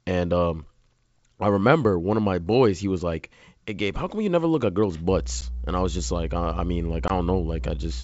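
A ground loop or nearby transformer starts coupling the 60 Hz power line into the signal at 5.08 s, just after "never look at girls'", and it stays to the end. This mains hum is a steady low tone with a few low harmonics, strong enough to sit close to the speech level.

At 5.41 s, right after the same phrase, the call suffers packet loss on an ADPCM call. About 10 ms of audio, roughly one packet's worth, drops out and is replaced by silence. Because the decoder's adaptive predictor and step size no longer match the sender's, the sharp-edged gap is followed by slightly distorted speech before it settles. A second loss at 7.08 s removes about 20 ms, likely a couple of packets, with the same hard hole and rough recovery. The G.722 wideband coding underneath stays clear up to about 7 kHz.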